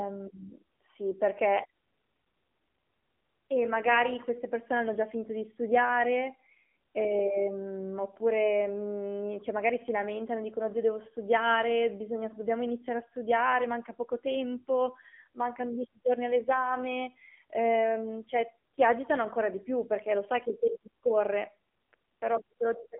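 From start to finish the speech carries AMR narrowband mobile codec damage. The band is confined to roughly 250 Hz to 3.4 kHz, with nothing at all above 3.4 kHz, so sibilants and breath lose their air. Because the codec rebuilds the voice from a vocal-tract model excited by sparse pulses, the speech has a plainly audible buzzy, synthetic edge, consistent with a low AMR-NB mode of around 7.4 kbps.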